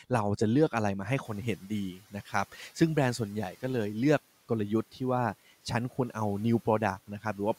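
Around 1 s the room noise steps up by about 11 dB, and from 1.24 to 1.57 s the noise suppressor is catching up: the louder noise passes with little reduction, then sinks by about 8 dB over 330 ms. Unlike a suppressor cutting speech, only the background changes, fading smoothly once the estimate adapts.

Speech cut by the noise suppressor follows at 1.57 to 1.7 s and 1.95 to 2.14 s. In each, about a tenth of a second of speech is pulled down with the background, by up to about 10 dB and then about 12 dB, so those sounds come out swallowed and faint. What sets this apart is that the speech itself dips along with the background.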